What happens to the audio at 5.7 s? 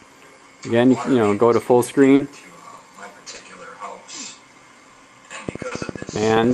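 A train of clicks runs from 5.49 s to the end at 6.54 s, covering 5.7 s, likely from electrical interference or a faulty connection injecting a pulse 14.8 times a second. The evenly spaced, similarly shaped pulses, peaking about 10 dB above the sound, come across as a steady ticking laid over it.

Inside that stretch, from 5.67 to 5.74 s, is a short concealed packet loss. About 40 ms of audio failed to arrive in time, so the receiver extended the preceding sound to fill the hole and then blended back into the real signal. The result is a brief smear or wobble, and a short sound there can disappear.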